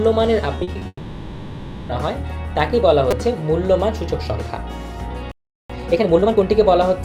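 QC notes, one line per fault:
0.55–0.87 s, repeated packet loss (robotic sound): six short gaps, the longest 40 ms, each patched by continuing the last sound. Nearly half the span is filled this way, so it sounds choppy and robotic.
0.87–1.91 s, long network dropout: about a second of sound becomes a fading buzz, then brief silence. This is likely audio that never arrived over the network, and that stretch is lost.
3.11 s, repeated buffer: a 5 ms piece plays three extra times with hard joins, heard as a short buzz. This fits a roughly 5 ms buffer, with around 15 ms of audio skipped.
5.32–5.70 s, playback stall: the output drops to silence mid-flow for about 380 ms, likely because the player ran short of data or its thread was blocked.
5.70–6.44 s, time-compressed catch-up: the sound runs 1.5 times fast at normal pitch, as small pieces are cut and cross-faded to clear the backlog.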